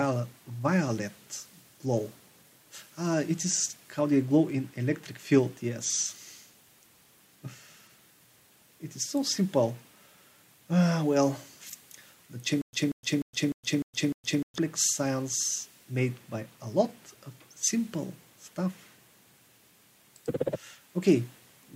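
Stutter with silent gaps from 12.62 to 14.58 s: a 187 ms fragment repeats six times with 115 ms of silence between, likely a stalled stream replaying its last fragment.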